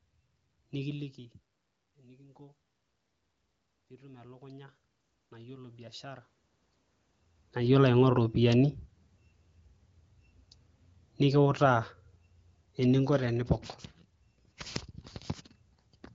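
From about 3.88 to 6.32 s you can hear automatic gain rising. The level going into the mic dropped by about 21 dB, so the gain control crept its gain up by about 9 dB over those two and a half seconds. The voice and the room noise behind it swell together rather than the voice alone, which is the giveaway that it's gain and not the talker shifting, as they do around 1 and 7 s.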